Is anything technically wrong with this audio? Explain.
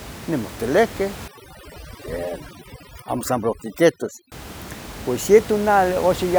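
Yes. From 1.28 to 4.32 s, overdone noise removal sets in: a noise reduction stage pushed too hard pulls individual frequency bands down or out whenever they sit near its noise estimate, dragging the quieter parts of the speech along. The background drops and breaks up into twinkling specks. Outside that stretch the room noise sits about 15 dB below the speech.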